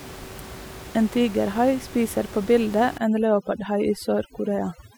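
From 2.98 s to the end, overdone noise removal kicks in: the reduction is set so hard that bands near its noise estimate get gated away, taking quiet bits of speech too. The room noise, about 17 dB down, collapses into twinkly specks.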